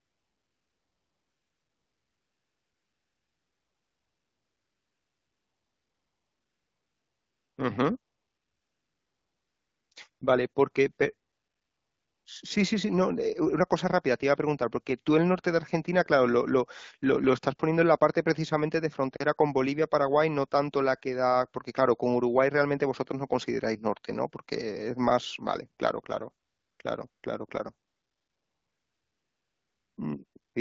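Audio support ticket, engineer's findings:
AMR comfort noise: DTX on the sending phone marking pauses as silence and dropping speech frames; receiver substitutes synthetic noise. Ten gaps, 0.00 to 30.55 s, longest 0.00 to 7.57 s, cluster 26.45 to 30.55 s. Smooth, steady hiss switching in and out. AMR-WB speech itself clear, fitting a 12.65 kbit/s mode.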